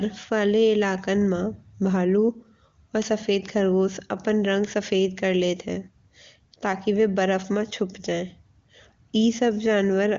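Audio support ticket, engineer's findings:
No faults found. HD Voice codec path sounds as expected.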